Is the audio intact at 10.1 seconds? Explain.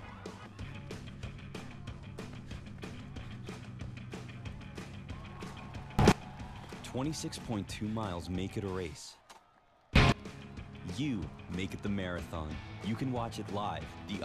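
No. From 9.96 to 10.12 s there is a sudden gain jump: the digital gain was likely switched from one sample to the next with no ramp, as a level setting or bit shift would do when applied instantly. The whole signal, background noise included, leaps up together by about 24 dB for that brief stretch, so the audio at 10.1 s is abruptly and unnaturally loud rather than intact.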